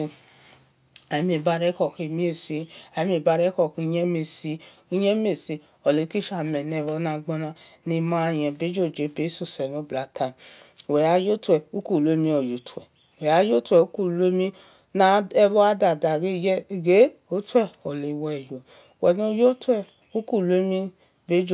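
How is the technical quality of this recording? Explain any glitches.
No glitches or technical faults are audible anywhere in the speech recording.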